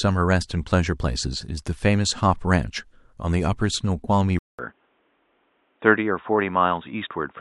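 At 4.39 s the speech cuts out for 200 ms, then returns boxy and dull until the end, most likely the input switching to a poorer device. A spectrogram shows nothing above 3.8 kHz and a faint new noise floor, while the waveform level barely changes.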